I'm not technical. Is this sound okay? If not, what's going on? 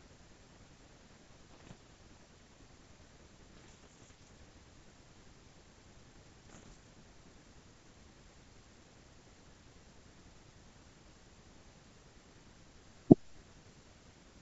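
No. Bit errors on an ADPCM link cause pops and rough, uneven bursts at 1.51 to 1.73 s, 3.57 to 4.28 s and 6.50 to 6.73 s, where a small fraction of the transmitted bits arrived flipped.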